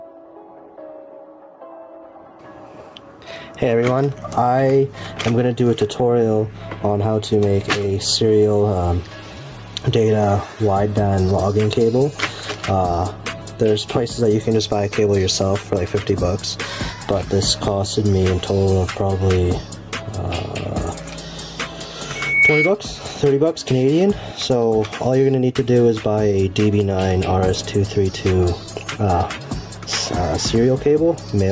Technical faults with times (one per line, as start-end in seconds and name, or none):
0.00-31.52 gain pumping
22.15-22.74 loudspeaker feedback squeal